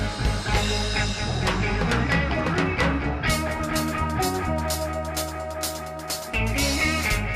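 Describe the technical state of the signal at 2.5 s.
At 2.5 s the signal is intact, with no audible fault.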